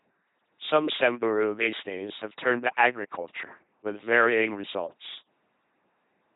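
LPC-10 vocoder damage runs throughout this speech clip, from start to finish. The speech is rebuilt from a ten-pole vocal tract filter driven by either a pulse train or noise, so it comes out as buzzing, mechanical robot speech at 2.4 kbit/s, with heavy damage and nothing above 3.8 kHz.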